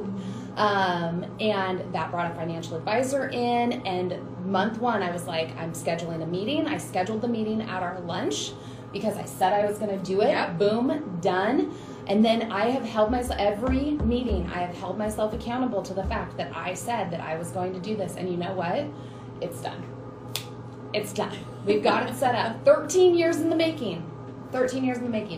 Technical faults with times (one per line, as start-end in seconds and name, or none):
none